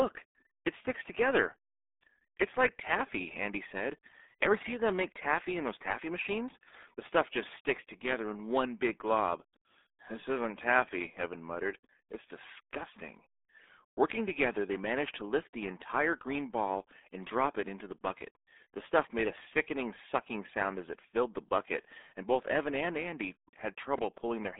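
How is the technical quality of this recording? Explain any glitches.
The technical quality is poor. The speech is heavily degraded by a low-bitrate codec throughout, and a double pop near the end is a separate fault.

RealAudio 14.4 codec, throughout: the speech has passed through the RealAudio 1 codec. It keeps roughly 250 Hz to 3.6 kHz and discards everything above 3.8 kHz, which fits an 8 kbit/s dial-up stream. The coarse coding at that rate is heavy here, so the speech sounds muffled and gargly, with a thin, boxy tone and no air or sibilant detail.

Loud pop, 23.98 to 24.20 s: two sharp pops land on top of the speech, which continues underneath them. They peak around 10 dB above the signal. The likely cause is a sudden electrical step or spike, such as a plug, a switch, static or a driver glitch. The circuits that follow shape each spike into a brief, punchy click.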